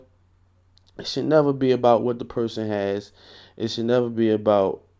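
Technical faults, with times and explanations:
No technical faults can be heard in this speech.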